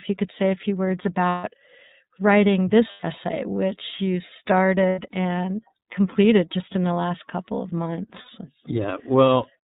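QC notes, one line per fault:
throughout: iLBC codec, with plainly audible rough, synthetic coloring from narrowband coding. The spectrogram is empty above 4 kHz, which fits iLBC's 30 ms, 13.33 kbps mode.
1.29–1.44 s: lost iLBC frames, 150 ms after "say a few words". The decoder repeats the last pitch cycle mixed with noise, giving a held buzzy vowel that shows as flat, repeating harmonics.
2.91–3.04 s: lost iLBC frames, 120 ms just before "which you". The repeated pitch cycle with added noise forms a sustained vowel-like smear, then the sound recovers almost at once because each frame stands alone.
4.89–4.99 s: lost iLBC frames, 90 ms just before "and completed just in". Concealment holds the previous pitch period with noise, leaving a short steady harmonic band on the spectrogram.
8.21–8.29 s: lost iLBC frames, 60 ms of concealment. The last pitch cycle repeats with noise, so the waveform shows a brief run of near-identical periods before normal sound resumes.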